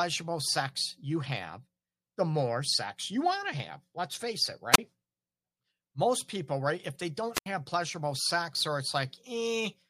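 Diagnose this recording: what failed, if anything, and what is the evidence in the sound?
Wireless microphone squelch dropout is the failure, in the analogue radio link ahead of the converter. At 4.72 to 4.78 s, just after "face it", the speech gives way to a brief rise of hiss and then a near-silent hole of about 30 ms. At 7.33 to 7.46 s the same happens with a longer 80 ms mute before "pleasurable sex or". The FM signal faded until the receiver's squelch shut the output. The swell of static before each gap distinguishes this from network packet loss.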